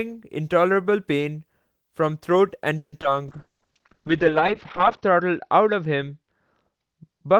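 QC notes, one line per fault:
2.77–3.05 s, repeated packet loss (robotic sound): four gaps in quick succession, the longest 150 ms. Most holes are patched by stretching earlier sound, so the speech turns choppy and robotic.
3.29 s to end, call bitrate drop: the top end narrows from 20 kHz to 6 kHz, and the sound turns coarse and muffled. This fits an encoder rate falling from about 32 to 10 kbps, and the roughness stays at its worst for about 1.75 s.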